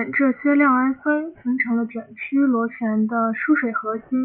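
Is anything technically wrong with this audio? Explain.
Yes. Aliasing runs throughout this speech. Content above 3 kHz folds back as unrelated tones roughly 25 dB down, consistent with unfiltered resampling to about 6 kHz, making sibilants gritty and metallic.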